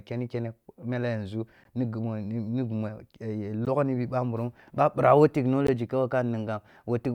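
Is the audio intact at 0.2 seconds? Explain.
Yes, at 0.2 seconds the speech is intact, with no dropout, click or other fault to be heard at that moment.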